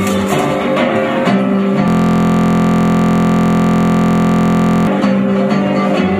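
From 1.88 s to 4.87 s a system hang loop takes over: the machine stalled while the hardware kept replaying one 23.22 ms buffer, which fits a 1024-sample buffer, heard as a steady 43.1 Hz buzz, with identical repeating waveform cycles and evenly spaced harmonic lines on a spectrogram.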